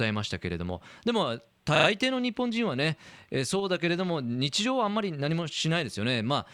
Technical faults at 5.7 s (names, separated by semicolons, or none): none